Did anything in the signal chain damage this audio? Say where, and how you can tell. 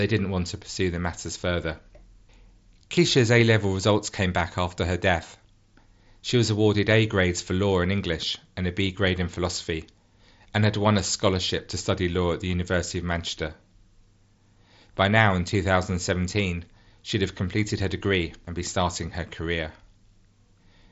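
No, no damage in the chain; speech passes up to 7.7 kHz.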